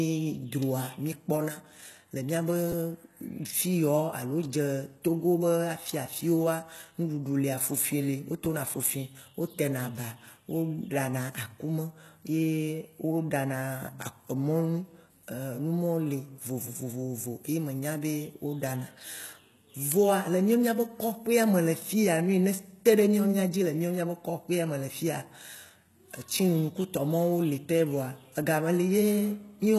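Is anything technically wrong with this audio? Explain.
Yes, two problems are audible in this speech clip.

Throughout, the treble sounds synthetic. Nothing is present above 12.3 kHz, and the s sounds come out gritty and metallic. This is likely HE-AAC compression at a low bitrate, around 16 kbps, where the upper band is rebuilt by copying lower harmonics upward. Unlike plain low-pass dulling, the top stays bright but false.

At 2.72 s and again at 8.45 s there is a repeated buffer: a 10 ms slice plays twice with hard joins when fresh audio arrives late. Each event loses about 10 ms of audio. It sounds like a tiny click-buzz rather than a silent gap, which sets it apart from a dropout.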